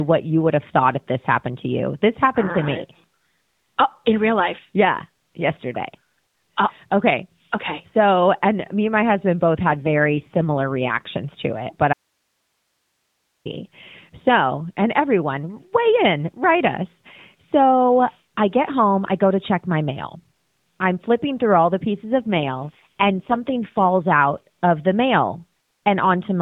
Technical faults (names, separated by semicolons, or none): AMR rate drop; audio dropout to a faint residue